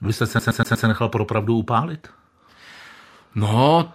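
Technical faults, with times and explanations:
0.39 to 0.87 s, CD stuck on one turn: the same 120 ms slice of speech plays four times in a fast, even stutter, with a brief mute at each jump, as a scratch keeps throwing the laser back one track on every rotation.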